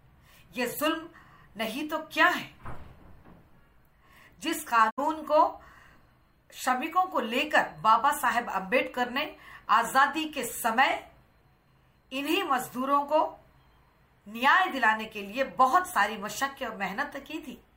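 The audio has a digital broadcast dropout from 4.89 to 5.00 s: the sound fades out over about 20 ms and goes silent, losing roughly 64 ms of programme, which fits two frames failing their checksum while the receiver muted until clean frames returned.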